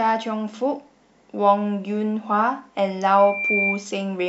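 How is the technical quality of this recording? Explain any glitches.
The recording has one clear fault, a loudspeaker feedback squeal near its end. From 3.18 s to 3.86 s a single tone at 2.4 kHz rises out of the speech, swelling over roughly a third of a second until it is about as loud as the voice. The microphone is picking up the loudspeaker it feeds, and at 2.4 kHz the loop gain has passed one, so that frequency keeps reinforcing itself. Unlike a steady interference whistle, it grows from nothing rather than appearing at full strength.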